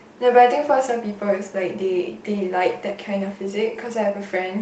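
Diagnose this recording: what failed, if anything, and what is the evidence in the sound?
Nothing failed; no fault can be heard anywhere.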